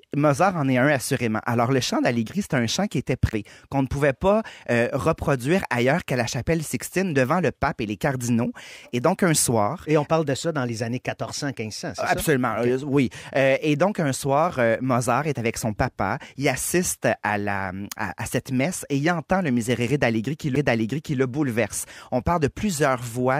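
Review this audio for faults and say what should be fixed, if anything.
CD skip at 3.31 s, after "un chant qui était" and before "qu'on ne pouvait pas", and at 20.55 s, after "et il entend le". The laser jumped tracks, so the player muted briefly (around 15 ms, then under 10 ms) and resumed the speech elsewhere on the spiral. Re-rip from a clean disc using an error-correcting, vibration-isolated drive.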